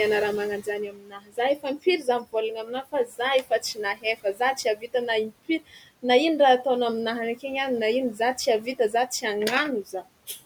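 Speech cut by the noise suppressor recurs four times: from 0.61 to 4.94 s after "raha mana" (about 19 dB at worst, roughly a second and a half in total), 5.3 to 6.04 s before "na ino" (about 16 dB), 8.16 to 9.24 s after "any na ino" (about 10 dB), and 9.85 to 10.4 s (about 13 dB). The suppressor mistakes quiet speech for the room noise, which sits about 21 dB below the speech, and pulls it down. Endings and soft consonants sound swallowed. On a spectrogram, speech energy fades abruptly into the noise floor, and the waveform shows sudden dips in the envelope.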